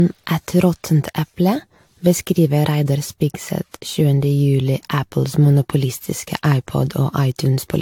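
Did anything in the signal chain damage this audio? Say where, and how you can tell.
Yes, at the codec stage, with generation loss present throughout the speech. The sound is swirly, hollow and smeared beyond what a single encode would leave, consonant attacks are blurred, and nothing reaches above 19.2 kHz. The character fits AAC-LC at around 96 kbit/s, likely decoded and re-encoded about seven times. Each pass quantises again on a shifted frame grid, so noise and spectral holes stack rather than cancel.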